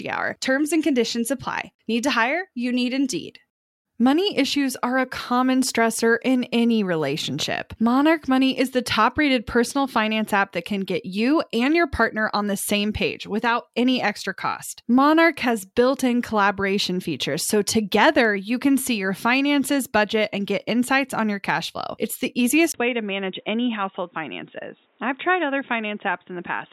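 At 22.72 s the speech goes abruptly dull and boxy after a brief gap of about 20 ms, and stays that way to the end at 26.72 s. Nothing above 3.8 kHz survives, the level falls by roughly 5 dB, and a new, different background noise appears, sitting well below the speech at around 40 dB down. Together these point to the input likely having switched to a poorer device, such as another microphone or a headset's narrowband call profile.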